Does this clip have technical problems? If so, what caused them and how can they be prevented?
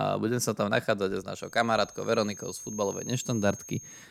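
Yes. A feedback whistle starts at 1.31 s and runs to the end of the clip. It is a thin, steady tone at 6.4 kHz, sitting roughly 15 dB below the speech and swelling and fading slowly in level. The likely cause is a loudspeaker-to-microphone loop held just at the edge of feedback. That single frequency keeps ringing without building up into a howl. To prevent it, lower the monitor gain, move the microphone away from the speakers, or notch out 6.4 kHz.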